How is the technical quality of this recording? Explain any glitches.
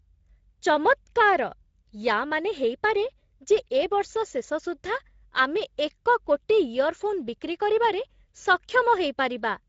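The technical quality is limited by Speex codec damage that is plainly audible throughout the speech. At this setting the CELP coder has too few bits to model the excitation, so the speech sounds noisy and hoarse, with a rough edge. The damage fits a low-to-middle Speex setting of about 16.8 kbps. On a spectrogram, harmonics look smeared and grainy between formants. The waveform keeps its overall envelope but loses fine periodic detail.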